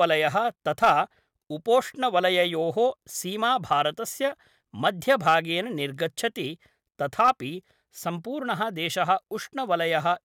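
Hard clipping hits three loud passages of the speech: 0.83 to 0.99 s, 4.87 to 5.39 s, and 7.20 to 7.30 s. The level overran what the chain could pass by about 4 to 5 dB. Peaks are sliced flat. That adds high harmonics, heard as crackle on the peaks.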